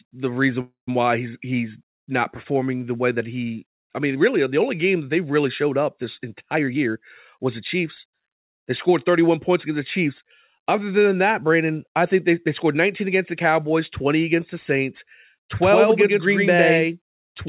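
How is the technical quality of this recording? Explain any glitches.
The recording is narrowband call audio with nothing above 4 kHz, which fits a G.711 phone codec. It has three kinds of glitch.

From 0.61 to 0.88 s there is a call audio freeze. The sound stretches into a fading buzz, then about 130 ms of silence. It likely comes from packets held up in transit, draining the jitter buffer. Speech resumes where it stopped, so nothing is lost. The clip is simply 264 ms later.

Two jitter buffer speed-ups follow. From 6.50 to 6.96 s the audio runs at 134% speed, and about 150 ms is cut. From 7.37 to 9.17 s it runs at 105% speed, and about 100 ms is cut. The receiver trimmed tiny pitch-period slices to shrink a backlog. Pitch stays the same, but speech sounds hurried.

From 15.62 s to the end there is a doubled audio track. A second copy at about the same level trails by roughly 100 ms. It starts abruptly and has no room colour. 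It likely comes from a second, slower capture path or an out-of-step edit.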